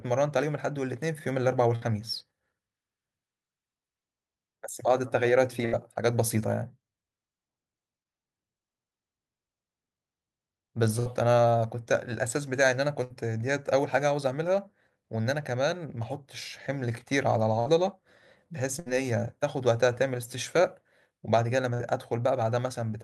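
The speech has a burst of packet loss at 1.75, 5.65, 11.0, 13.04, 17.6, 18.8 and 21.74 s. Each time, the receiver stretches and fades the last sound for about 60 ms, giving a short buzz or hiss, then resumes with roughly 60 ms skipped.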